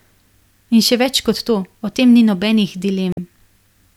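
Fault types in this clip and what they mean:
Damaged data in a compressed stream: corrupted bytes throw the decoder off frame sync, giving a short chirp, squawk, click or hole at 3.12–3.19 s, right after "o tem ni nobenih".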